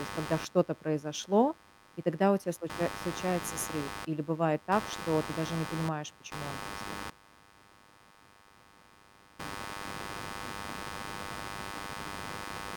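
From start to finish there's computer activity noise riding under the speech: a buzzy, chirping grit pulsing around a hundred times a second, fairly loud, roughly 10 dB below the talker. It comes from processor or graphics load shifting the shared ground, so it tracks the machine, not the voice.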